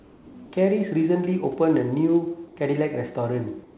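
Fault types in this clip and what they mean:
Comfort noise in place of the background: In the pauses from 0 to 0.34 s, 2.48 to 2.56 s, and 3.64 s to the end, the room background gives way to a smooth, featureless hiss. This stand-in sits about 1 to 2 dB lower than the real background. That background lies about 28 to 30 dB under the loudest speech. The likely cause is discontinuous transmission: the sender stops sending during silence, and the receiver synthesises matching noise to fill the gap.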